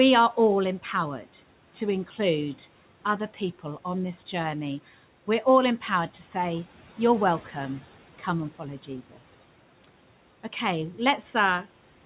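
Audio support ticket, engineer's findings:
Speech cut by the noise suppressor, 8.83–9.2 s, right after "and follow". Low-level speech dips about 11 dB, roughly 150 ms swallowed in total. Suppressor misclassified quiet speech as background and gated it down with room noise, which sits about 24 dB below speech.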